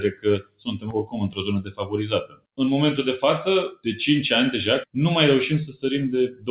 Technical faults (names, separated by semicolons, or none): noise suppressor applied to music or sounds; sound cut by the noise suppressor